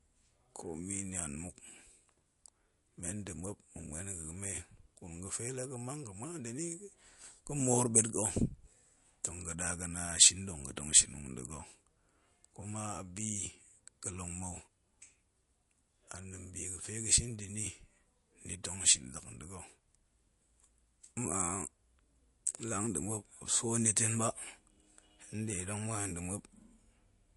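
From start to finish the treble stops dead at about 11.3 kHz, and the speech has a watery, swirling quality, with metallic chirps on s sounds and smeared consonant attacks. On a spectrogram this shows as a flat ceiling at 11.3 kHz, with faint detail below it breaking into flickering, patchy blocks. The likely cause is MP3 compression at a low bitrate, one that fits around 48 kbps, where the encoder discards weak frequency lines frame by frame and cuts off the top band.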